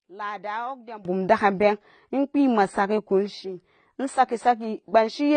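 For the first 1.05 s the speech drops by about 19 dB and turns faint, likely one channel inverted, so the shared centre cancels when summed. All the way through it's dull, with nothing above 9 kHz and smeared, warbly sibilants, likely AAC compression at a low bitrate, which fits roughly 24 kbps.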